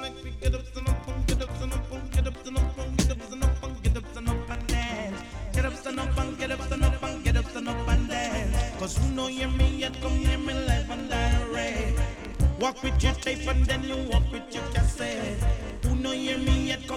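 No technical faults can be heard anywhere in the clip.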